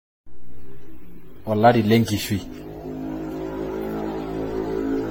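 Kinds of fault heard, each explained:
Generation loss: the whole clip has a swirly, smeared, hollow quality, with consonant onsets softened and nothing above 16.6 kHz. That's more damage than a single encode would leave, so it's likely the audio went through a lossy codec around ten times, decoded and re-encoded on a shifting frame grid so the quantisation noise and spectral gaps stacked up. The character fits AAC-LC at about 64 kbit/s.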